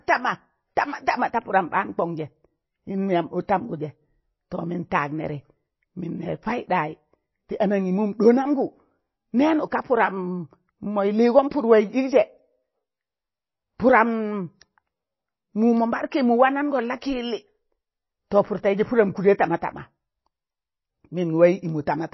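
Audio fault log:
Throughout, MP3 compression. The speech has nothing above about 5.8 kHz, so it sounds dull and muffled. Weak detail flickers in and out, giving a watery, swirly quality. This plainly audible damage likely comes from a low bitrate, around 24 kbps.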